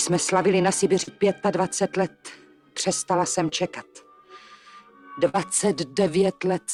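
Short concealed packet loss occurs at 1.03 to 1.09 s and again at 3.49 to 3.53 s. In each case a small stretch of the stream, about 40 ms and then 20 ms, failed to arrive in time for decoding. The receiver bridged the hole by extending the sound just before it and then blending back into the real signal. Each one is heard as a fleeting smear or wobble.

A burst of packet loss follows at 5.29 to 5.38 s, where several consecutive packets went missing together. Concealment carried the preceding sound forward for roughly 46 ms while turning it down, so it comes across as a held, decaying continuation rather than a clean cut. When real audio resumes, it picks up slightly further along, with a few milliseconds of the original skipped.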